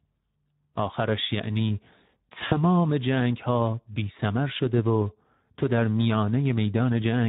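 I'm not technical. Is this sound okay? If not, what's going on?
No. The whole clip has been squeezed through the Speex codec, an older speech codec from internet calls and game chat. Here the squeeze is plainly audible. The voice sounds rough and hoarse.

At 2.49 seconds there is VoIP packet loss concealed by the speech codec. About 20 milliseconds of sound went missing. The decoder filled the gap by stretching the last sound it had. The voice stays weak or distorted until about 2.57 seconds.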